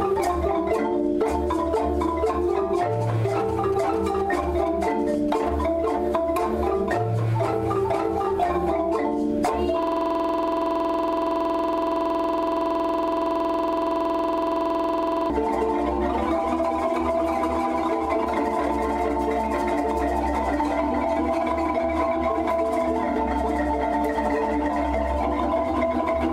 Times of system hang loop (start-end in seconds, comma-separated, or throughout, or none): 9.83-15.30